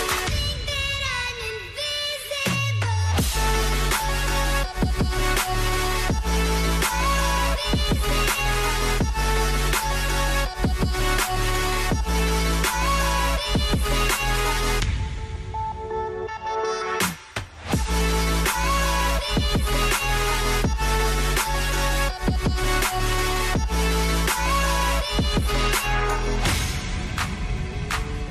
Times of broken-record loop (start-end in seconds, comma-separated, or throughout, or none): none